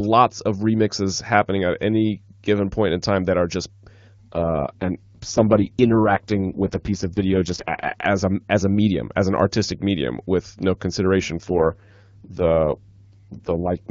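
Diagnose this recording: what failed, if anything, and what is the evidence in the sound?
Speech turns rough and raspy, with no gap or band loss, at 4.32–8.06 s and 11.36–13.89 s: a network-driven AMR rate drop, consistent with 6.6 kbit/s.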